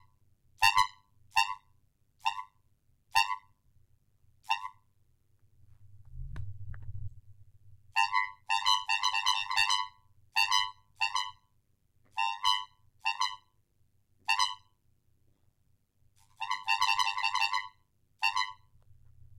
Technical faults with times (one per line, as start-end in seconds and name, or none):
0.00-19.39 overlap-add ripple